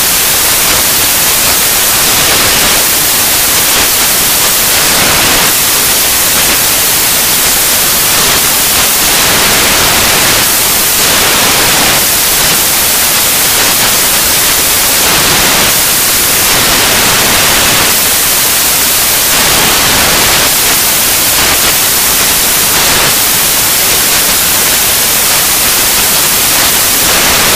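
The whole clip carries loud, harsh broadband noise from samples built from the wrong bytes: the reader assembled each sample's bytes wrongly, so jittery low-order bits became the dominant part. A spectrogram shows broadband noise filling every frequency.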